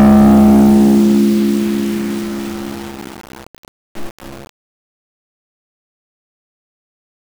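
From the start to 1.28 s the music suffers hard clipping: driven about 14 dB beyond what a stage could pass, its peaks are sliced flat, spraying high harmonics into a harsh fuzz. The abrupt flat tops, rather than gentle rounding, distinguish it from soft saturation.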